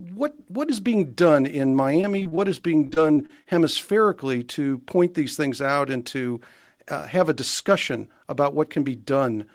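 From 2.01 to 2.39 s, after "is being done in", and again from 2.87 to 3.47 s, before "hemispherically to point these", repeated packet loss (robotic sound) chops the speech. Several holes of up to about 30 ms each are patched by repeating the preceding sound. Unlike a single dropout, the gaps recur in quick succession.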